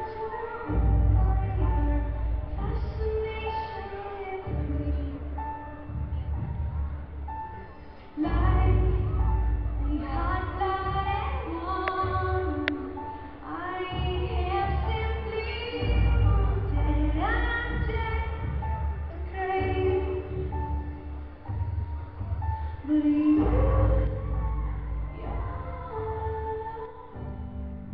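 Nothing stood out on listening to this recording.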